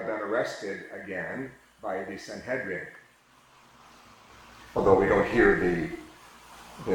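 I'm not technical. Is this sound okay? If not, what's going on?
No. Overlap-add ripple from 2.99 s to the end: the sound was chopped into overlapping slices and rejoined unevenly, so loudness wobbles about 400 times a second, giving a metallic buzz.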